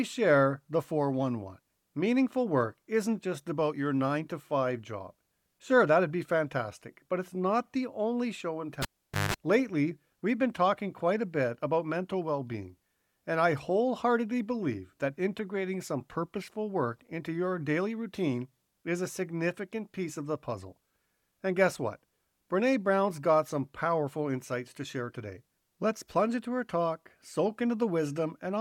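At 8.82 s the speech breaks as a live cable is pulled and plugged in: a pop, about 470 ms of near silence, including roughly 180 ms of 50 Hz mains buzz while only the plug tip makes contact, and a second pop as signal returns at 9.34 s.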